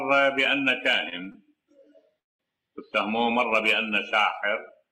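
Right around 1.1 seconds you get three quick short stalls from a late packet, at 1.09 to 1.15 s, 1.24 to 1.29 s and 1.32 to 1.37 s. Each time a packet didn't show up on schedule, the jitter buffer drained, and the receiver stretched the last bit of sound by 21 to 24 ms until the packet arrived. Nothing gets dropped. Each hiccup just adds a little extra delay, so what you hear is a held sound with a faint buzzy smear, three times in quick succession.

Then at 2.20 s there's a call audio freeze lasting to 2.42 s. The last sound gets carried on briefly and then falls away into about 190 ms of silence before the audio picks up exactly where it left off, so roughly 0.2 s of gap has been inserted and nothing is missing. That's likely packets held up in transit long enough to empty the jitter buffer completely.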